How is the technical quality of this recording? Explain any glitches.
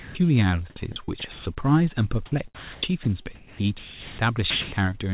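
The recording has several voice-detector glitches that break up the speech and swap the real background for synthetic hiss. Underneath, it's a narrowband call: nothing comes through above 4 kHz, which fits G.711 mu-law at 64 kbps.

Right at the start, 0 to 0.15 s, there's sound dropped by the voice detector. The opening 140 ms or so of speech never arrives, and a steady, flat noise sits there instead. Most likely the sender's detector hadn't triggered yet, treated that onset as background, and held off transmitting while the receiver filled in comfort noise.

Then there's sound chopped by the voice detector, twice: 0.92 to 1.62 s, where about 250 ms gets replaced, and 2.26 to 4.18 s, where roughly a full second is lost in pieces. The detector is likely flipping between sending and muting mid-phrase, so quiet syllables and word edges drop out and get patched with synthetic noise. You hear choppy speech.

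Finally, 4.50 to 4.72 s has comfort noise in place of the background. During a pause the sender likely stopped transmitting, and the receiver generated its own noise for about 220 ms. The background there sits around 24 dB below the loudest speech, and the fill shifts the level by about 10 dB, so the swap is audible as a sudden, smooth, detail-free patch of noise.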